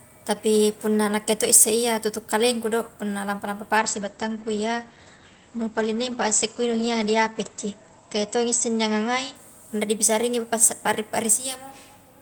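From 3.79 s to 9.41 s a call bitrate drop coarsens the speech: the encoder falls from 32 to 13 kbps for about 4.5 s, sounding muffled and watery. On a spectrogram the energy above 8 kHz vanishes, a flat ceiling replacing content reaching 20 kHz.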